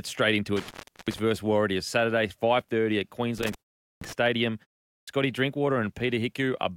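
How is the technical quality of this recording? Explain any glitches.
The technical quality is compromised by two kinds of fault: a loose connection that twice cuts the speech, and output wake-up delays that clip two word onsets.

Intermittent contact occurs from 0.57 to 1.19 s and from 3.38 to 4.13 s, with the line open for about 373 ms and 427 ms. A loose plug or cable breaks the signal path, so speech vanishes into faint hiss, bracketed by crackle. On a waveform this looks like a sudden flat gap with spiky edges. A spectrogram shows vertical broadband streaks at each edge.

Clipped start after a pause hits at 3.97 s and 5.03 s, each following a silence of about 0.4 to 0.5 s. The output device sleeps during the pause and wakes late, swallowing roughly 44 ms of each onset. The words jump abruptly out of silence. A waveform shows a hard, steep-fronted start, and a spectrogram shows the first part of the onset energy missing.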